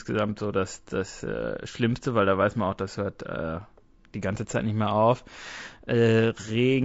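Throughout, the speech sounds plainly rough and grainy, with noise between harmonics, likely low-delay AAC compression (AAC-ELD) at a bitrate around 32 kbps.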